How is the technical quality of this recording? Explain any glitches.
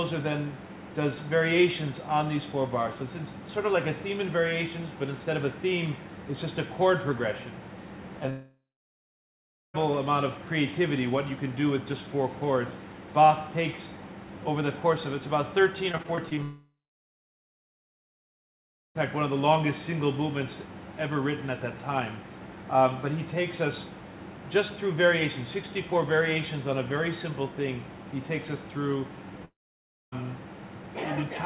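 The recording has clear network faults: three long breaks where the sound stops and a short choppy stretch. The audio is band-limited, with nothing above 4 kHz, which fits the G.711 mu-law call codec at 64 kbps that it passed through.

Long network dropout, at 8.3 to 9.76 s, 16.43 to 18.97 s, and 29.45 to 30.24 s: at each, the last sound carries on briefly and fades, then silence follows for about 1.14 s, 2.23 s and 0.61 s respectively. The audio returns further on with a piece missing, roughly 1.44 s, 2.52 s and 0.68 s. The likely cause is that no packets reached the receiver for those stretches, so it stretched the final sound until there was nothing left to continue.

Repeated packet loss (robotic sound), from 15.92 to 16.39 s, just before the second dropout: the sound turns choppy, broken by six short holes, none longer than 20 ms. Together they remove about 120 ms, and patching covers about 21% of the span. 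Packets were lost or late again and again, and each hole was filled by continuing the previous sound before the next loss arrived.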